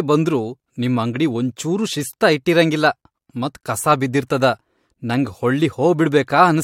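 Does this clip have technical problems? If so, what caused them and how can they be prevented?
No, there's nothing technically wrong to hear here, so there's no cause to track down or fix.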